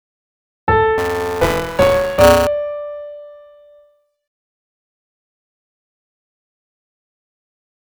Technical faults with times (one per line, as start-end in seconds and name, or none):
0.98-2.47 buffer tearing